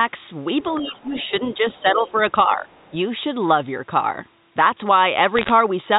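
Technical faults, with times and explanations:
0.8–1.33 s, 1.54–1.62 s, 1.82–2.18 s and 2.48–2.68 s, speech suppressed in double talk: the talker's level pulls down in these stretches, by up to about 15 dB in the first, about 5 dB in the second, about 10 dB in the third and about 5 dB in the last. The affected parts add up to roughly 0.4, 0.07, 0.3 and 0.2 s. This is likely an echo canceller that heard far-end sound on the loudspeaker at the same time and could not tell the local talker from the echo, so it turned both down.
1.16–1.31 s, 1.72–1.81 s and 2.7–2.93 s, other side's voice leaking through: a second voice comes in underneath the talker in short scraps. It sits about 25 dB below the main speech in the first scrap, about 30 dB below in the second and about 35 dB below in the third. The likely cause is loudspeaker sound from the far end that the echo canceller failed to remove fully from the microphone signal, so some of it still reaches the send path.
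5.37–5.5 s, bit errors on a digital phone line: a burst of sharp ticks crackles over speech that is otherwise unchanged in this stretch. The error rate is roughly 0.7 percent. On this G.711 A-law line, which runs at 64 kbps, each flipped bit alters one sample. A hit on a high-order bit or on the sign bit of a loud sample throws that sample far from its true value, and each such sample produces a tick.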